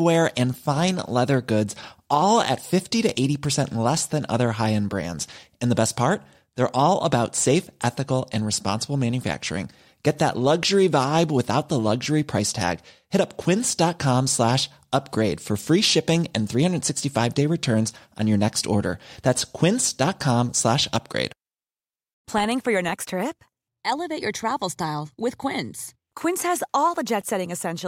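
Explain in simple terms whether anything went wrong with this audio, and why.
Nothing stood out as wrong when listening to this speech recording.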